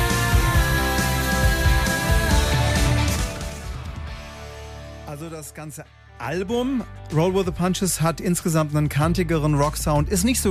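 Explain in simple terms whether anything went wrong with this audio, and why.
From 5.97 to 6.66 seconds, a fast ticking, zipping sound rides on the audio while its loudness shifts by a large amount. This is zipper noise: the volume was changed in small jumps, about ten per second, instead of a smooth glide, and each jump clicks.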